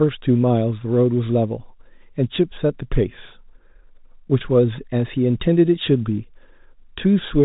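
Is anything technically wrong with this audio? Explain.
No, nothing is technically wrong: the speech carries the narrow, band-limited sound of G.711 telephone coding, with nothing above about 3.8 kHz, as expected of a 64 kbps telephone path.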